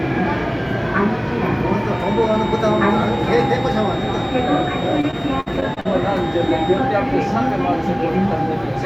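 From 1.84 s to 6.9 s, a feedback whistle runs behind the sound. This is most likely a loop from a loudspeaker back into the microphone held just at the edge of feedback, so a single tone near 3.7 kHz keeps ringing without building up. It comes across as a thin, steady whistle sitting well below the main sound, swelling and fading slowly in level, and it stays present for about five seconds.

Between 5.01 s and 5.87 s, inside that same stretch, repeated packet loss produces robotic sound. Audio data went missing again and again in quick succession. Each hole was covered by stretching out the sound just before it, and the next hole arrived soon after. About a fifth of this span is patched-over material, with the longest gap around 58 ms. The result is choppy audio with small pieces missing, while the whistle continues underneath.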